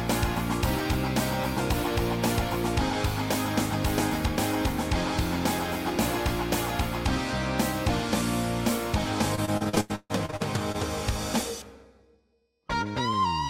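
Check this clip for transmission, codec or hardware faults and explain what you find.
One transmission fault. From 9.35 to 10.76 s the sound turns choppy and robotic. This is repeated packet loss: about a dozen gaps, each filled by stretching the preceding sound, with about a third of that stretch concealed.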